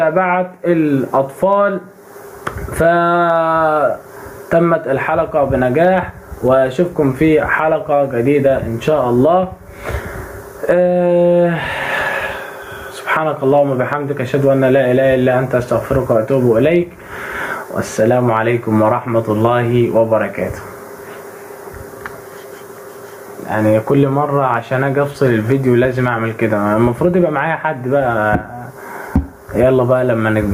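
Gain pumping runs through the whole thing: the gain swings by around 20 dB, ducking under each loud moment, likely from mic gain set far too hot into a fast limiter.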